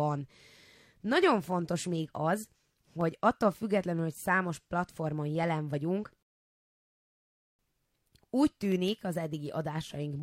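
At about 6.23 s the speech just stops dead and sits in silence until 7.59 s, then picks up exactly where it left off. That's a rebuffering stall: the player burned through everything it had downloaded and had to wait for more data before carrying on. Nothing gets skipped or garbled, but you lose roughly 1.36 s to the gap, so the clip runs that much longer than it should.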